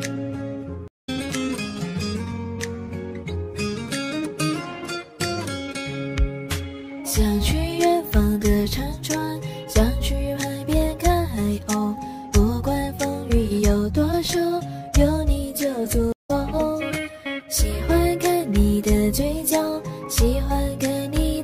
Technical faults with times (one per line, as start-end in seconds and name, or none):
0.88-1.09 stream reconnect
16.12-16.31 stream reconnect